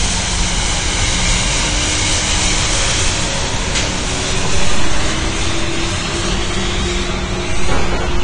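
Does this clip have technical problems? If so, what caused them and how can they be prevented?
Yes. Throughout the clip there is audible lossy-codec damage, most likely AAC compression. Nothing sits above about 9.5 kHz, so the sound is dull, and the remaining spectrum is smeared and textured, which fits AAC-LC at a low rate near 32 kbps quantising coarsely against a hearing model. A simple low-pass filter would cut the top cleanly, with no holes or warbling below the cut-off. To prevent it, keep an uncompressed or high-bitrate master and encode at a higher bitrate.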